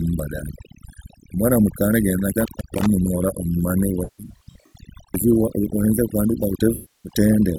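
Overdone noise removal runs through the whole speech recording: an aggressively set noise reducer pulls individual frequency bands down or off wherever they sit near its noise estimate, so the background collapses to near silence with twinkling specks while quieter voice detail disappears. An intermittent contact hits from 2.32 to 2.86 s, where a loose cable or plug briefly opens the line and the signal drops out for about 280 ms, with crackle at the edges and only faint hiss left in the gap. AAC frame loss with concealment appears from 4.04 to 4.76 s and again from 6.74 to 7.12 s. The decoder patches missing frames from the last good spectrum, which produces smeared, noisy, phasey stretches. The first episode loses about 384 ms scattered over roughly 680 ms, with the longest run around 150 ms. The second loses about 300 ms.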